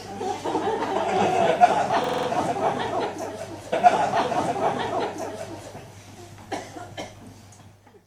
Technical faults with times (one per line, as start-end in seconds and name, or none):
2.04-2.28 system hang loop
3.72-5.71 stream segment repeated